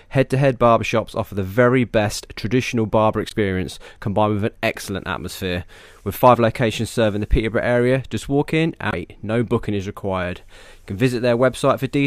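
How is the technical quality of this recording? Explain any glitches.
Two brief glitches disrupt this speech recording. Both come from damaged data in a compressed stream. They occur at 3.28–3.33 s, after "very best traditional barber", and at 8.90–8.94 s, after "area just walk in". Corrupted bytes make the decoder lose sync and hunt for the next valid frame. Each is a short glitch, lasting about 52 ms and 44 ms respectively.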